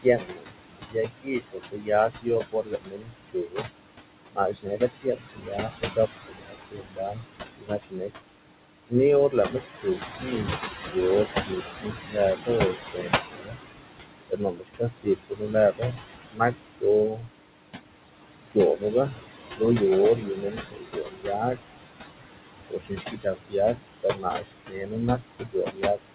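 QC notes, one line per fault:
throughout: noise suppressor artifacts. The room noise sits only about 8 dB under the speech, and the suppressor pulls it down by about 21 dB between phrases and lets it swell back under them. The codec's roughly 4 kHz ceiling is separate: it is fixed, not level-dependent.
0.03–3.69 s, 4.33–8.12 s, 8.89–13.6 s, 14.29–17.28 s, 18.41–21.59 s, 22.68–26.15 s: speech cut by the noise suppressor. Quiet consonants and word endings are mistaken for noise and dropped by up to about 19–22 dB, sounding swallowed. This affects roughly 1.5–2 s of speech in each of the first five stretches, whereas the pumping affects the background.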